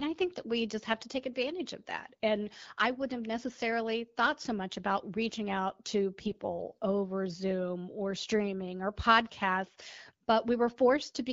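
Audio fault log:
6.21–6.48 s, AMR bit errors: for about 0.27 s the speech turns hoarse, scratchy and gargly while keeping its pitch and level. This fits a run of about thirteen 20 ms AMR-WB frames decoded with a few percent of their weaker bits flipped. Unlike packet loss, there is no gap, fade or smeared repeat, only corrupted excitation and spectral detail.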